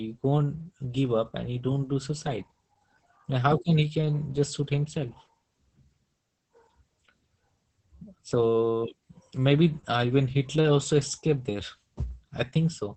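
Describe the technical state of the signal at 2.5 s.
At 2.5 s the speech is passing through Opus voice compression, a fault that runs through the whole clip. The encoder is in its SILK linear-prediction mode, keeping a wideband signal with nothing above about 8 kHz, and is starved for bits, which fits a rate near 10 kbps. With the excitation coded so coarsely, the speech here sounds muffled and hoarse, with a slightly robotic, buzzy edge in place of natural breathiness and detail.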